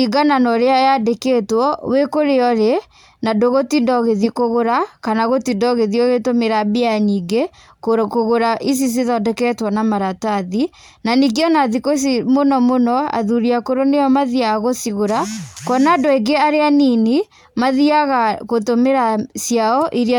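Nothing in the recording stood out as a problem on listening.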